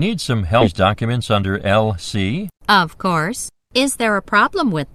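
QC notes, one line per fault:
0.61 s, skip ahead: about 0.4 s of audio is dropped with no fill, so playback jumps forward and the two sides join almost directly, with content missing.
0.85–2.17 s, jitter buffer speed-up: the buffer held excess audio and trimmed repeated pitch-period slices, roughly 150 ms in total, so the sound runs about 110% speed at unchanged pitch and seems hurried.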